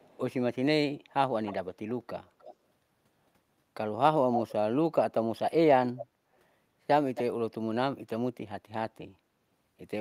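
Brief, delayed repeats of the speech surface at 0.0–0.18 s, 1.45–1.55 s, 2.39–2.55 s, 4.32–4.52 s, 5.98–6.05 s and 7.15–7.23 s. They trail the original by 325 ms at first, 307 ms through the middle and 273 ms in the last two. The opening one is barely audible; the one near 4.3 s comes close to the speech's own level. This is echo leak, likely from a loudspeaker at the far end whose echo canceller let part of its microphone pickup return into the call.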